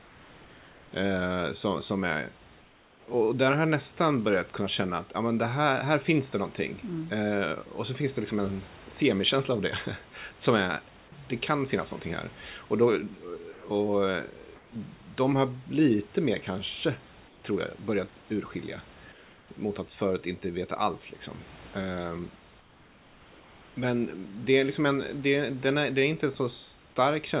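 In this speech clip, heard through a narrowband call path with nothing above 4 kHz, the pauses lose their natural room texture at 0–0.92 s, 2.6–3.08 s (between "som som är" and "och där har jag"), 14.56–14.72 s, 17.28–17.44 s, 19.12–19.48 s and 22.6–23.76 s. The background turns flat and featureless and is about 2 to 4 dB quieter. This is likely comfort noise in place of the background, synthesized while transmission halted. At 13.52–13.64 s a brief sound gives way to that steady noise, likely sound dropped by the voice detector, which mistook it for background.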